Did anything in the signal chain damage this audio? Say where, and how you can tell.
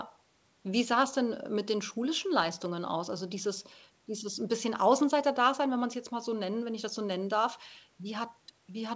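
No, nothing here points to damage anywhere in the chain; the speech simply carries the normal marks of a wideband call, with the microphone processing and the codec, G.722 at 64 kbps by the sound of it, leaving nothing above 8 kHz, which is just where that path tops out.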